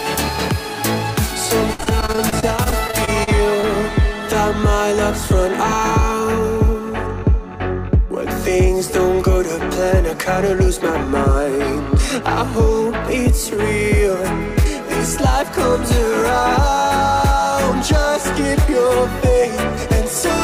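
From 1.73 to 3.65 s there is repeated packet loss with a robotic sound. Around twenty short holes, the longest 53 ms, are patched by extending the preceding sound. About a fifth of the stretch is concealed this way, so the audio turns choppy.

From 5.27 to 7.35 s a jitter buffer speed-up occurs. The receiver had built up excess delay and trimmed small pitch-period slices, around 40 ms in total. The sound runs at about 102% speed with pitch unchanged.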